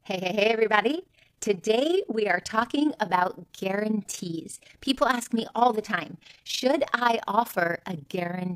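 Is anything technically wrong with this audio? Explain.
Yes. Throughout the speech there is overlap-add ripple. The signal was split into windowed frames and rebuilt with an overlap whose windows do not add up to a steady gain, so each frame boundary leaves a dip or bump in level. The loudness swings by about 11 dB around 30 times a second, which lays a fast, rough flutter over the voice and gives it a tremolo at the frame rate.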